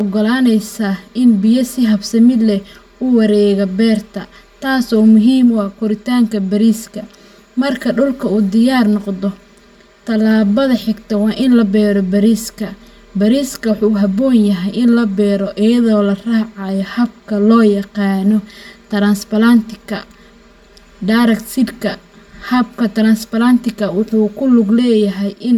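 Channel delay (comb filtering) runs through the whole speech clip. One channel arrives about 5 ms late, and the two are summed to mono. Cancellations start near 100 Hz and repeat evenly above it. The speech sounds hollow and phasey.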